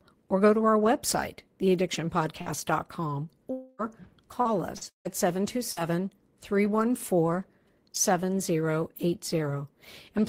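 At 2.41 to 2.49 s there is a short concealed packet loss. About 40 ms of the speech never reached the decoder in time, so the receiver extended the preceding sound across 45 ms and blended back. It is heard as a brief smear in the speech.

Inside that span, from 2.46 to 2.48 s, a lost packet was rebuilt from error correction. The following packet carried a low-bitrate copy of those 20 ms, which the decoder played instead of a gap. The result is a rougher, noisier fragment.

From 3.51 to 3.82 s the sound breaks off into a continuation of the last sound, buzz- or hiss-like, that runs about 280 ms and covers nearly the whole stretch without falling to silence. The likely cause is a long network dropout, with no packets arriving during that time.

Repeated packet loss, with robotic sound, follows from 3.79 to 5.80 s. Four separate gaps, the longest 158 ms, are each patched by continuing the preceding sound, covering about 14% of the stretch. 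Around a tenth of a second was rebuilt from redundant data. The speech sounds choppy, with pieces missing.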